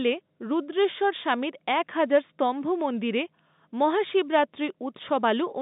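No technical faults can be heard in the speech, which carries the narrow band of an ordinary G.711 telephone line, from roughly 150 Hz to 3.7 kHz, with at most a faint trace of the coding's quantisation noise following the signal level.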